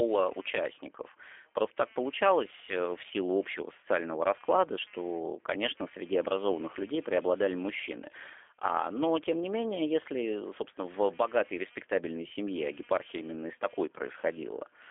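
It's a speech clip with two problems running the whole way through. First, there's computer activity noise: a buzzy, chirpy pulsing somewhere around 200 Hz, roughly 30 dB below the speech. It rises and falls with the machine's processing load rather than with the talking, because load swings are shifting the ground the audio circuit shares. Second, the speech has gone through the G.729 codec. The sound fits an 8 kbit/s G.729A stream, cut down to a telephone band of about 300 Hz to 3.4 kHz, with nothing above 3.5 kHz. The codec damage is plainly audible as a rough, slightly synthetic edge, since the codec rebuilds the speech from a vocal tract filter, pitch prediction and a few pulses per frame instead of carrying the actual waveform.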